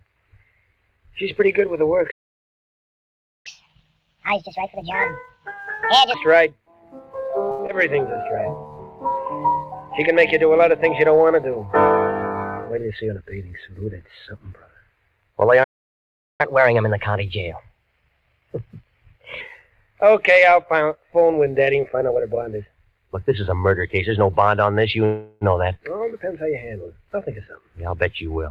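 At 2.11 s the audio stops dead in mid-flow and stays silent until 3.47 s, about 1.34 s. This playback stall most likely comes from the player running out of data or having its output thread blocked.

From 3.47 s to 6.14 s comes a catch-up at higher speed: the player works through its backlog at 1.5 times normal rate by resampling. Because speed and pitch are tied together here, everything is raised by roughly seven semitones and sounds chipmunk-like and rushed. At 6.14 s it drops back to normal pitch and pace.

At 7.51 s there is a short stall from a late packet. A packet missed its playout time and the jitter buffer ran dry, so the receiver stretched the last sound for 74 ms until the packet arrived at 7.62 s. Nothing is lost, but that moment is held unnaturally long.

Almost immediately afterwards, at 7.67 s, comes a short concealed packet loss. About 40 ms of audio never reached the decoder. 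The receiver papered over it with only 17 ms of extrapolated sound before blending back into real audio at 7.72 s, so the gap is partly collapsed. It comes across as a brief smear or wobble.

Between 12.69 s and 13.59 s a jitter buffer speed-up runs the audio at 110 % speed. The buffer had grown beyond its target, so the receiver trimmed out pitch-period-sized slices repeatedly, about a tenth of a second in total. Pitch stays put while the pacing sounds slightly hurried.

A second playback stall silences the output from 15.63 s to 16.41 s, about 0.75 s. It is followed by a milder catch-up at higher speed from 16.41 s to 19.41 s at 1.1 times normal rate. That lifts the pitch by roughly a semitone and a half, enough to sound slightly sharp and brisk before it settles.

At 25.05 s a call audio freeze sets in. Packets were likely held up and the jitter buffer emptied, so the receiver continued the last sound as a fading buzz or hiss for 364 ms. 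It never reaches full silence. The real audio resumes at 25.44 s from where it stopped, so a gap has been inserted but nothing is missing.

From 27.61 s to the end another jitter buffer speed-up plays the audio at 114 %. Pitch is unchanged but the pace is noticeably compressed, as the receiver drains the extra delay by cutting short pitch-period pieces in quick succession.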